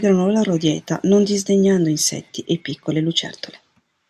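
Nothing here calls for comment, since no faults turn up anywhere across the speech.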